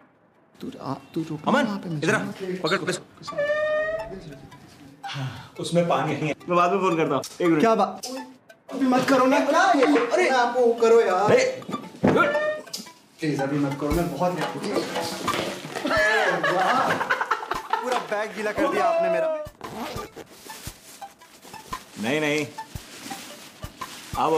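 Five brief garbled flutters interrupt the audio, at 2.77–2.99, 6.11–6.33, 9.74–9.96, 11.62–11.84 and 20.06–20.28 s. These are frames out of order: within each stretch of about 0.22 s, two neighbouring blocks of about 104.5 ms (which fits runs of four frames) play swapped, without losing any time.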